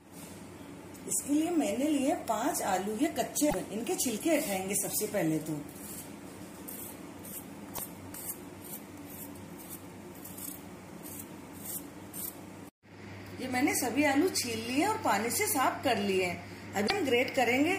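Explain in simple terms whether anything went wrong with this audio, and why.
Three short glitches stand out, at 3.46 to 3.55 s, 7.72 to 7.79 s and 16.84 to 16.91 s, each lasting well under a tenth of a second. They're damaged data in a compressed stream: part of the file got corrupted, so the decoder couldn't make sense of that stretch and had to hunt for the next clean starting point. What you hear is a brief chirp, click or short hole before the sound picks back up.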